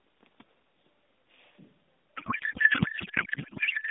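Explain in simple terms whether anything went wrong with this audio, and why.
A codec payload misread starts at 2.17 s and runs to the end. The speech becomes garbled, warbling noise that barely follows it. The receiver unpacks the mobile codec's bits in the wrong layout, which fits byte-aligned frames read as tightly packed ones.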